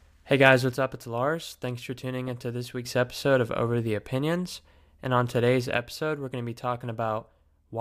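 A speech recording whose level sinks abruptly by about 6 dB from 0.74 to 2.85 s and again from 5.77 s to the end at 7.80 s, as if half the signal vanished. The likely cause is one channel dropping out, halving what the mono sum receives.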